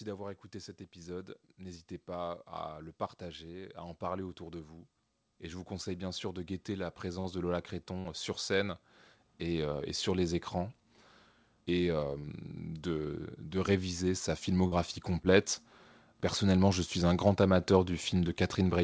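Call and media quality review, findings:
Short concealed packet loss, 4 events in the speech: brief smears/wobbles at 7.20–7.27, 8.00–8.09, 12.19–12.26 and 14.67–14.74 s. Each covers roughly 40 ms of missing audio. The jitter buffer's concealment extends the preceding sound (pitch-based if voiced, shaped noise if not) and then crossfades back into the real audio. At 8.00 s a further 12 ms is dropped, so a short sound can vanish there. Call path shows nothing above 8 kHz, consistent with G.722 at 64 kbps.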